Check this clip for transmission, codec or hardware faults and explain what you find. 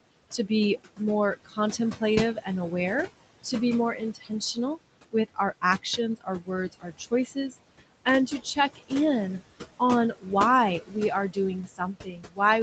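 Two faults are audible, both from the noise suppressor. The room noise sits about 12 dB below the speech.

Noise suppressor artifacts run through the whole clip. The suppressor treats steady bands as noise and pushes them down by about 20 dB, frame by frame. The background sinks in pauses and swells under speech.

Speech cut by the noise suppressor occurs at 0.31–2.48 s, 3.43–4.57 s, 5.12–7.52 s, 8.05–8.92 s, 9.79–10.26 s and from 10.8 s to the end. The suppressor mistakes quiet speech for noise. It dips by about 14 to 20 dB, so soft consonants and word endings sound swallowed. The 5.12–7.52 s stretch loses about 0.7 s in total.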